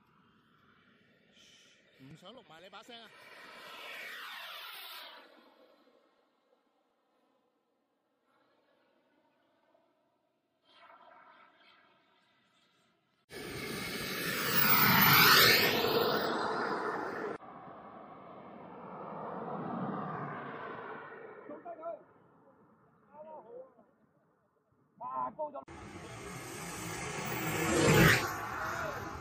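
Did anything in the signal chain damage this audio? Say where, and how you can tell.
Yes. Throughout the clip the upper detail sounds watery and swirly, with smeared attacks. That points to the codec stage, likely MP3 compression at a low bitrate around 64 kbps, where weak frequency lines are dropped and flicker between frames.

At the driver or buffer stage, periodic USB or driver dropouts run from 1.87 to 7.15 s. Regular ticks recur every 0.24 s, about twenty in all, where roughly 10 ms of audio is skipped each time because a blocking task repeatedly starves the audio stream.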